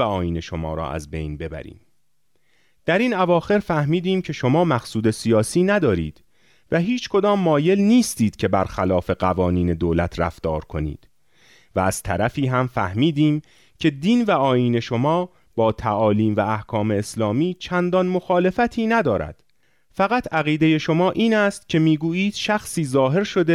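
Nothing goes wrong anywhere in this stretch of speech, so there's no technical fault to point to at any moment along the way.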